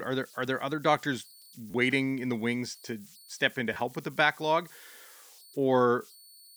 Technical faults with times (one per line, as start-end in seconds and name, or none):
0.00-6.57 converter idle tones
1.71-1.74 repeated buffer
3.74-3.76 repeated buffer